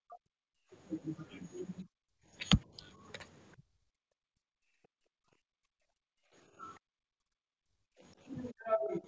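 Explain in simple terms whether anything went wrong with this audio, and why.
Several things went wrong, all tied to the call's echo canceller.

The first is speech suppressed in double talk. From the very start, at 0.03 s, to the end of the clip, the talker's sound keeps sinking, at times very deeply. It loses strength and can break up. The likely cause is that both sides spoke at once. The echo canceller could not tell the talker apart from the loudspeaker's echo, so it turned everything down.

The second is background gated by the echo canceller. The room sound drops out in three places. At 0.52 to 0.71 s it falls away sharply. At 2.25 to 2.32 s there is only a slight dip. From 3.91 to 8.03 s it cuts in and out, and the sound is deeply muted for about two seconds in total. Each time, the canceller clamped the microphone while the loudspeaker played, then let go.

The third is the other side's voice leaking through. 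At 6.75 to 6.79 s a very faint scrap of another voice slips in. It is far quieter than the main speech and lasts only a moment. The likely cause is that the loudspeaker played the other side, and the canceller missed a bit of it. The mic picked that bit up.

Nothing is heard above 8 kHz. That comes from the normal call path and is not a fault.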